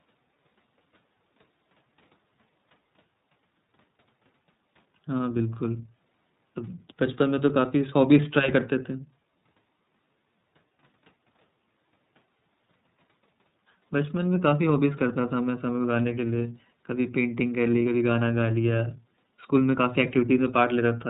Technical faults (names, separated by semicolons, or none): iLBC codec